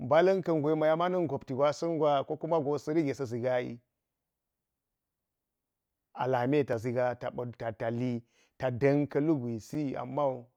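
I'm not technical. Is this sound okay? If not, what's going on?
No. There are two blocks of digital silence: the audio system likely fell behind and output zeros for a moment, causing tiny click-like dropouts at 6.73 s, just after "lame ta", and at 9.75 s.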